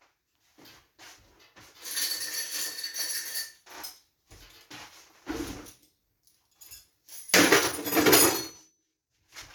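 A time-stretched section runs from 7.51 s to the end at 9.55 s, where the pace abruptly jumps to about 1.46 times the earlier rate while the pitch stays where it was. The audio turns rushed. This is likely software squeezing the final stretch to fit a shorter length, holding pitch steady by dropping short slices and splicing the remaining pieces back together.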